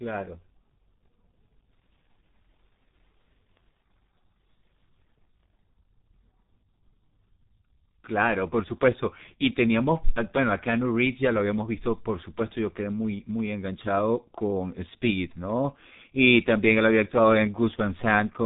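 Speech runs through a G.723.1 codec for its whole length, and the damage is heavy. Nothing above 3.8 kHz survives, so it sounds muffled, and the coarse voice model, consistent with a rate near 6 kbit/s, adds a hoarse grain and smears consonants together. A simple low-pass filter would dull the top end but leave the voice clean. Here the voice itself is roughened and blurred, which marks it as coding damage.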